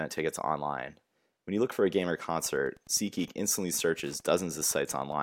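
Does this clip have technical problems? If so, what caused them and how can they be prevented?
Yes. Wi-Fi interference starts at 2.41 s, just after "for a game or", and runs to the end of the clip as steady ticking roughly 30 dB below the speech. A nearby Wi-Fi radio's beacon bursts, repeating every 102.4 ms, are being rectified in the audio circuit, giving about ten ticks per second. That slow, regular click rate sets it apart from mobile-phone interference, which is a much faster buzz. To prevent it, keep routers and Wi-Fi devices away from microphones, preamps and cables, and use shielded, balanced connections.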